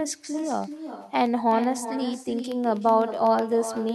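Speech, shadowed throughout by echo with no canceller: a distinct copy arrives around 400 ms after each phrase, about 11 dB quieter and thinner. Because it is a separate delayed repeat rather than a smooth decaying tail, it comes from the far end's loudspeaker feeding its microphone, not from room reverberation. From 0.14 s to 3.89 s there are also periodic USB or driver dropouts, some thirty tiny silent gaps far shorter than a millisecond, falling exactly every 0.125 s as ticks. That clockwork spacing points to a recurring task stalling the audio driver, rather than random network packet loss.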